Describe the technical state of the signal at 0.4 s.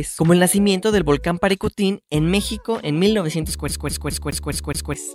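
At 0.4 s the signal is intact, with no audible fault at that point.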